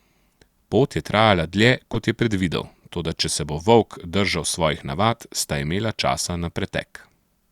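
Speech, with a corrupt frame decoded between 1.93 and 1.96 s, just after "je trajala dlje" and before "kot je predvidel toda". A single compressed frame arrived with damaged bits, and the decoder rendered it anyway, misreading its gains and codes so energy landed at the wrong frequencies. It is heard as a brief, loud chirp, squeak, blip or burst of noise, peaking at roughly -5 dBFS. On a spectrogram it shows as a short vertical smear of stray energy unrelated to the surrounding harmonics. On the waveform it shows as a sudden spike of about 30 ms.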